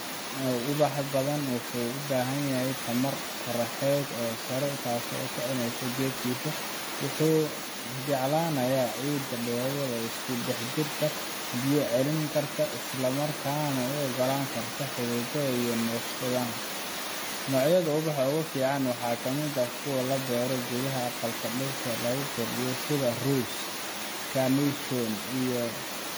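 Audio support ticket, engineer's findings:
Generation loss, throughout. Speech swirly, smeared and hollow. Consonant attacks blurred. Likely cause: repeated lossy re-encoding, around seven passes. Each pass requantises on a shifted frame grid, so noise and spectral holes stack. Fits an AAC-LC chain near 64 kbit/s. Nothing above 20 kHz.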